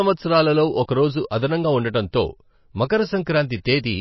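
A speech clip with plainly audible watery, swirly artefacts throughout and nothing above 5.8 kHz, most likely heavy MP3 compression at a low bitrate, around 24 kbps.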